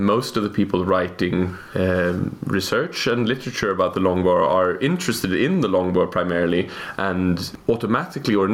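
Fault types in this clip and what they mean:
gain pumping: the background swells in gaps and ducks roughly 15 dB under loud sounds, likely a fast limiter on excess gain; a gate would silence gaps instead.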